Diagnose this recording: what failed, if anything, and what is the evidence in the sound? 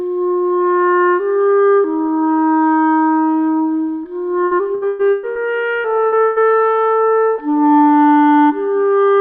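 The network path failed, with repeated packet loss (robotic sound) from 4.45 to 5.38 s. The sound turns choppy there. Five separate holes open in under a second. The longest lasts 120 ms. Each hole is filled by stretching the last received sound, about 420 ms of patching in all. That is roughly 45 percent of the stretch. The holes come too close together to recover between them.

Right after, the network stage drops three bursts of packet loss. They fall at 5.77 to 5.88 s, 6.07 to 6.15 s, and 6.24 to 6.39 s. Each burst is a single held, fading smear rather than a clean gap. The receiver extends the last sound and lowers it as the hole lasts. The missing stretches are about 60, 60 and 120 ms. Playback then resumes further along, with that audio gone.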